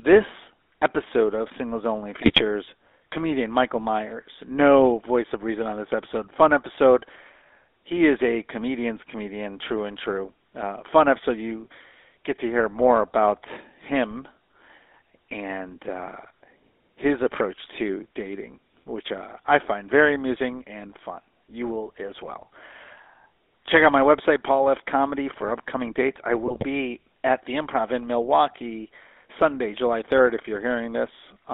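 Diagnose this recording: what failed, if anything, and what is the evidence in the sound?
Codec stage: the whole speech clip carries GSM full-rate codec damage, and it is plainly audible. The band runs from about 300 Hz to 3.6 kHz, and the sound fits a 13 kbps GSM full-rate encode. The coder models the vocal tract and excites it with sparse, regularly spaced pulses. That gives a buzzy, gravelly roughness, not the clean dullness of a simple low-pass filter or a narrowband line with no codec.

Network or radio link stage: GSM bit errors corrupt the decoder's input in three bursts, at 2.21 to 2.41 s, 14.11 to 14.15 s and 26.46 to 26.67 s. The speech turns into squawks, pops and gargling for those stretches. Damaged filter, pitch or gain values distort each frame they reach. This is distorted decoded output, not the gaps or repeated audio of lost packets. The damage fits bit error rates of roughly 1 to 2 percent.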